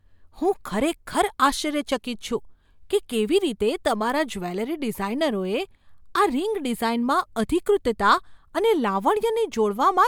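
Speech recording with no technical faults to report.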